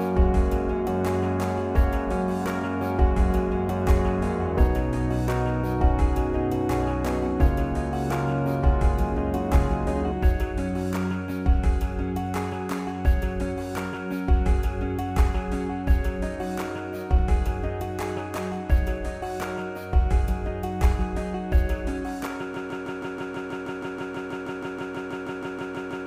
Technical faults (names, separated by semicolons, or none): broken-record loop